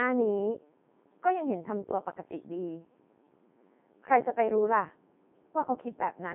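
Codec 2 vocoder damage runs through the whole clip, from start to finish. Rather than preserving the waveform, the decoder rebuilds the speech from sine waves driven by pitch, voicing, energy and a coarse spectral envelope, so the voice comes out robotic and buzzy, with heavy artefacts. The sound points to the codec's highest mode, around 3.2 kbit/s. The band sits between 150 Hz and 3.6 kHz, with nothing at all above 3.8 kHz.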